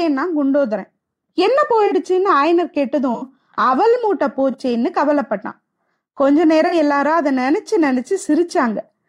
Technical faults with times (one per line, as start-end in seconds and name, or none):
1.86-1.93 corrupt frame concealed
3.14-3.23 corrupt frame concealed
4.51-4.55 corrupt frame concealed
6.67-6.74 corrupt frame concealed